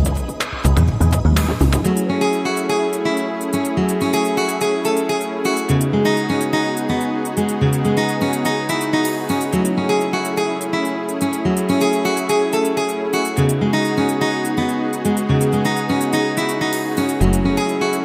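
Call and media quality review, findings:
Nothing to flag here: no dropouts, glitches or level jumps turned up anywhere in the recording, so this one can be closed out.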